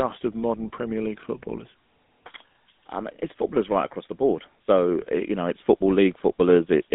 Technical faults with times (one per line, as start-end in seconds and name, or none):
0.00-6.95 GSM full-rate codec